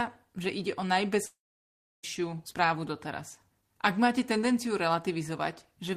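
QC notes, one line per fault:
1.25–2.05 s, long network dropout: after "že ide o" a fading buzz gives way to about 0.7 s of silence, then "správu doteraz" resumes with roughly 0.8 s missing, likely from lost packets.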